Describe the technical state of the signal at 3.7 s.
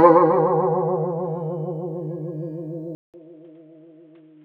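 At 3.7 s the music is inside a stretch running from 2.95 s to the end, which points to the input having likely switched to a poorer device. After a 0.19 s gap, the band stops near 4 kHz, the level falls by around 10 dB, and a new, faint noise floor appears.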